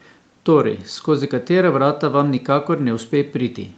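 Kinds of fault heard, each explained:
No faults can be heard in this speech. The sound has passed through call microphone processing and a WebRTC call path with the Opus codec, and nothing is heard above about 8 kHz.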